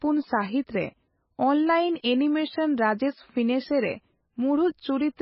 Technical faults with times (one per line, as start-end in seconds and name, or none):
0.00-5.21 MP3 compression